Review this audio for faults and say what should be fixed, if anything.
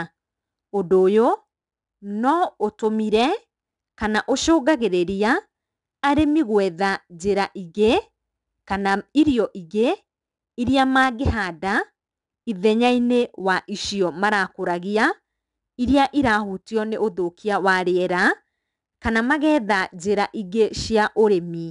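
4-bit ADPCM compression runs through the whole speech clip and is plainly audible as a gritty hiss that rises and falls with the voice. Each sample is coded as a coarse 4-bit step from a prediction, so the error grows with the signal. Unlike steady background noise, this hiss disappears in pauses, and unlike perceptual codecs it doesn't warble or swirl. The data rate points to about 89 kbps, and nothing above 10.7 kHz fits a sample rate near 22 kHz. To prevent it, keep the recording as uncompressed PCM at a full sample rate, or use a modern perceptual codec at an adequate bitrate.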